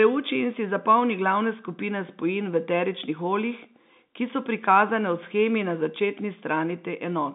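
No technical faults can be heard in this speech recording.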